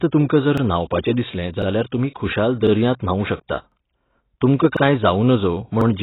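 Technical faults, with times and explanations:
Throughout, AAC compression: the speech is band-limited with nothing above 3.9 kHz, and it sounds dull and smeared, with warbling and fizz on sustained vowels and sibilants. The likely cause is heavy AAC-LC coding at around 16 kbps, where the encoder lowers the cut-off and starves the remaining bands of bits.
0.58, 1.62, 2.67, 3.72, 4.77 and 5.81 s, overlapping chunks: about 48 ms of audio plays twice at each point, giving a short stutter or click at regular intervals. Each 1.0 s chunk begins before the previous one finishes, so the overlap is replayed at every join.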